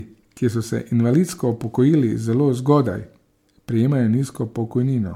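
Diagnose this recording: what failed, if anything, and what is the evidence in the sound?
Codec stage: swirly, hollow smearing and blurred attacks run throughout, worse than a single 96 kbit/s MP3 pass explains. The bandwidth still reaches 20 kHz. This is likely generation loss from about three re-encodes.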